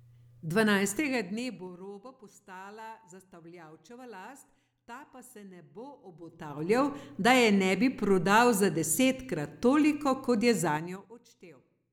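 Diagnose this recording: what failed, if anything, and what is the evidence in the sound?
Zipper noise from a gain stage updating in coarse steps, unsmoothed: each step clicks, ticking about ten times a second. Heard at 0.93–1.86 s before "postala zastavljavčeva" (2 dB steps down), 6.13–6.78 s before "da je" (3 dB up), and 10.68–11.15 s (5 dB down).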